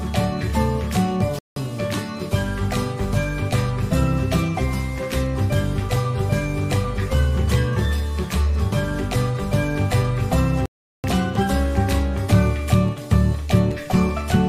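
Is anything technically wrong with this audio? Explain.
Yes, there are two playback stalls, at 1.39 to 1.56 s and 10.66 to 11.04 s. The player likely ran short of data or had its thread blocked, so output fell silent for about 175 ms and then about 383 ms before the sound resumed.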